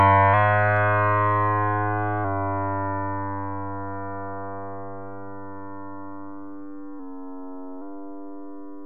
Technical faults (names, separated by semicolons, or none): drift correction step